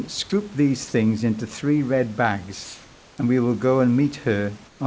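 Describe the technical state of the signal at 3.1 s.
At 3.1 s the background has been replaced by comfort noise. The span runs from 2.64 to 3.18 s, about 540 ms, between "things into three red" and "and we will go". The real room noise turns into a smooth, featureless hiss, about 2 dB different in level. The likely cause is discontinuous transmission: the sender went quiet during the pause, and the receiver filled it with synthetic noise. Like the rest of the call audio, it has nothing above 8 kHz.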